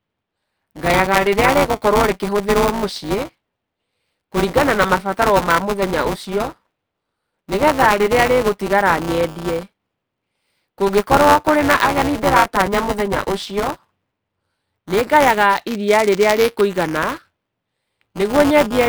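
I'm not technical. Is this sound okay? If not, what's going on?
No. Buffer tearing runs through the whole clip. It's a steady robotic buzz, about 200 times a second, riding on the speech and gone in the gaps between it. The program filling the playback buffer and the sound hardware emptying it have drifted out of step. In every short chunk, which points to a buffer of about 5 ms, a small slice holds audio from around a hundredth of a second earlier, and the abrupt joins on both sides of that slice make the buzz.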